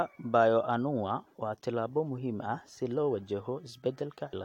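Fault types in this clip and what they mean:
Damaged data in a compressed stream: bad data near the end, at 4.32 s, knocks the decoder off sync, so the sound briefly breaks up for about 14 ms.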